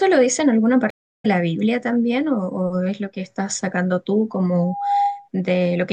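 At 0.90 s the speech drops out in a stream reconnect: the connection broke, playback went silent for about 0.31 s, and a fresh decoder picked the stream up again by 1.26 s. Because the stream kept moving during the gap, the speech resumes a little later than where it left off, skipping roughly 150 ms of material. On a waveform this is a flat, empty stretch followed by an envelope that ramps up over the first frame or so. On a spectrogram it shows as a blank vertical band with a slightly soft onset after it.

From 4.60 s to 5.29 s a loudspeaker feedback squeal takes over. A microphone was picking up the loudspeaker it fed, and at 807 Hz the loop gain exceeded one, so that frequency reinforced itself on every pass. Over roughly a third of a second it swells from a faint whistle into a steady, piercing tone that ends up around as loud as the speech. A spectrogram shows a single bright horizontal line at 807 Hz that brightens as it builds. 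The waveform's envelope thickens into a dense, regular oscillation.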